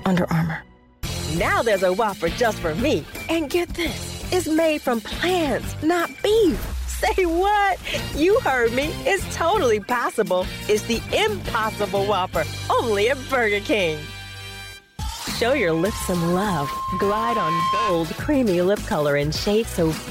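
Loudspeaker feedback squeal appears from 15.44 to 18.12 s: a steady 1 kHz tone swells over about two seconds until it is roughly as loud as the rest of the audio. A microphone is picking up its own loudspeaker, and at 1 kHz the loop gain exceeds one, so that frequency keeps reinforcing itself.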